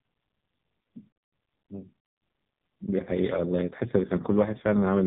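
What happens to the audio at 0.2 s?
At 0.2 s the speech is passing through the AMR narrowband mobile codec, which runs through the whole clip. Nothing above about 3.8 kHz survives, so the sound is thin and muffled. The damage is heavy. The voice is rebuilt from a vocal-tract model driven by a few sparse pulses per 5 ms subframe, giving a buzzy, synthetic texture. This fits one of the lowest AMR-NB modes, around 5.15 kbps.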